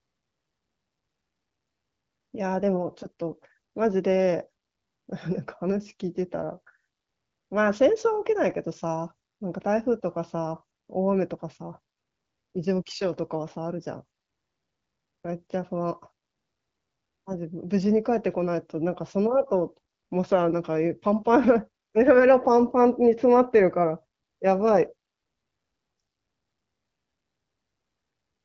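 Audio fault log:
No faults are present in this speech clip. It is carried by the AMR wideband (HD Voice) codec with only light coding damage and nothing above about 7.4 kHz, which fits a rate near 15.85 kbit/s.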